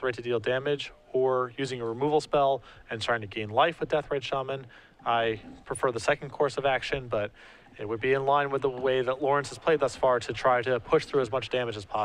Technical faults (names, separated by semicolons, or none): none